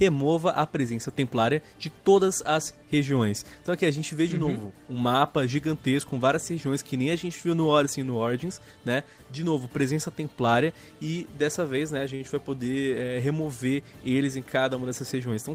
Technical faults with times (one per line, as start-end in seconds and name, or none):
12.15-12.22 short stall from a late packet
14.82-15.51 jitter buffer speed-up